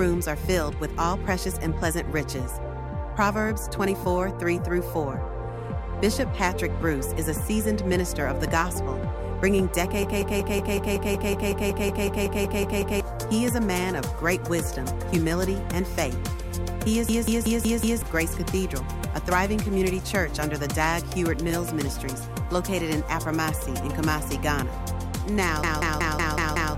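The system froze three times while the sound hardware kept replaying its ring buffer, a system hang loop. Each time, one piece of about 186 ms, which fits an 8192-sample buffer, repeats exactly at 5.38 Hz, giving a machine-gun stutter. It runs from 10.03 to 13.00 s (16 repeats, about three seconds of audio lost), 17.09 to 18.02 s (5 repeats), and 25.64 to 26.75 s (6 repeats), each losing about a second.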